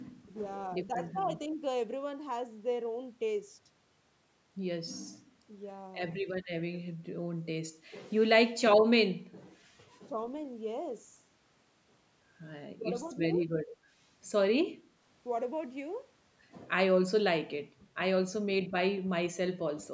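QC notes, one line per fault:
8.36–8.5 s and 12.79–12.83 s, speech suppressed in double talk: the echo canceller likely mistook simultaneous talk from both sides for loudspeaker echo and pulled the level down. In the first event, about 70 ms of the speech is turned down hard, by around 25 dB. The second event is a shallow dip of about 5 dB lasting roughly 40 ms.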